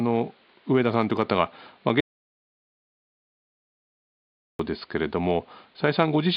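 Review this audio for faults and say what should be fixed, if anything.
At 2.00 s the speech just stops dead and doesn't pick up again until 4.59 s, so you lose about 2.6 s of it. That's an audio dropout to silence. The gap is silent: even the faint room noise, sitting about 37 dB under the speech elsewhere, vanishes completely. That points to the input going away, likely a dropped connection or a mute, while the recorder kept writing blank samples. To prevent it, secure the cable or link and monitor input levels live so a lost feed gets caught straight away.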